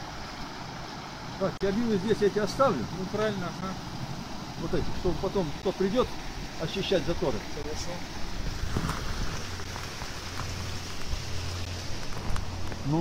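A gap at a join of encoded pieces opens at 1.57–1.61 s (about 33 ms), then briefly at 3.61, 5.62, 7.63, 9.64 and 11.65 s. Separately encoded pieces were joined with their start delay and end padding left in. The regular 2 s spacing and the sound resuming exactly where it stopped distinguish it from random dropouts.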